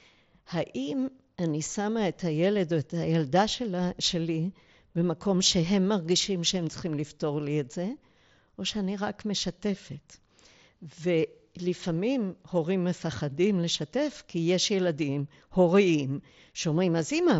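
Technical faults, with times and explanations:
No technical faults can be heard in this speech. It carries the signature of the mSBC Bluetooth headset codec: nothing above about 7.7 kHz and a light grainy texture on the louder sounds.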